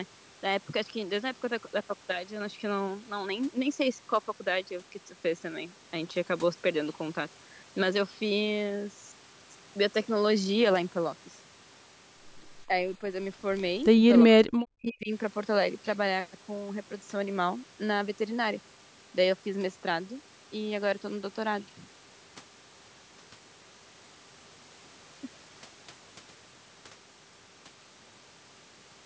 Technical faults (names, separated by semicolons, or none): speech suppressed in double talk